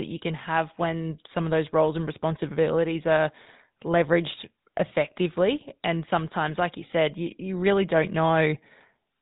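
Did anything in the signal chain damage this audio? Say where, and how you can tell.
Yes. The damage happens at the codec stage and lasts the whole clip. The speech has a buzzy, gravelly roughness from start to finish. Nothing is heard above about 3.8 kHz. That texture matches the GSM full-rate codec, and the damage is plainly audible. The codec models the vocal tract and drives it with a coarse train of regular pulses, keeping only a third of the excitation detail. That fits a 13 kbps stream.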